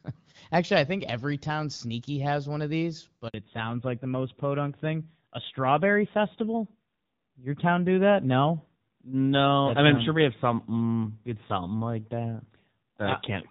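Speech that cuts out abruptly just after "has one of these", at 3.28 s, leaving a dead silence of about 60 ms until 3.34 s. This is a handover gap: the call switched networks and no speech frames arrived during the changeover, so whatever was said in that instant is lost. From 3.34 s to the end, the voice turns duller and rougher, with nothing above 4 kHz. This is a fallback to narrowband. The call dropped from AMR-WB (HD Voice), heard before the gap with only light coding damage, to a narrowband AMR codec, and the rougher texture fits a rate of about 7.4 kbit/s.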